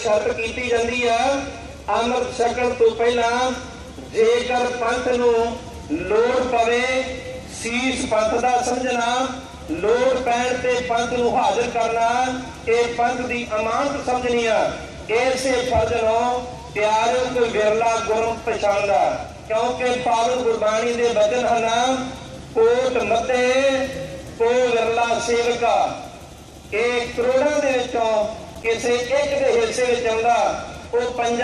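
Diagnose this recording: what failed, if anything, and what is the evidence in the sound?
A worn or dirty contact in the analogue wiring was making and breaking as it moved. From 28.37 to 28.66 s this loose connector crackle chops the signal into a ragged burst of scratching, lasting about 0.3 s.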